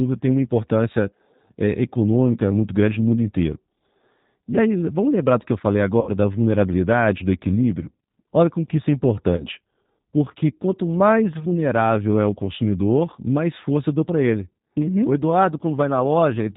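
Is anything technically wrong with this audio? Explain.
Yes. The whole recording was encoded with the G.729 codec, most likely at its 8 kbit/s rate. It rebuilds speech from a vocal tract filter, a pitch predictor and a few pulses per frame, so nothing above 4 kHz survives, and the voice sounds plainly rough and synthetic.

VoIP packet loss concealed by the speech codec occurs twice. After "do que eu falei", about 60 ms of audio was lost, which fits three 20 ms packets. The decoder extended its last pitch and filter with falling gain, so a fading buzzy or noisy smear runs from 6.01 to 6.11 s before "da vulnerabilidade do equilíbrio". After "como que isso é", a single 20 ms loss is concealed the same way, and the sound stays weakened from 9.37 to 9.46 s.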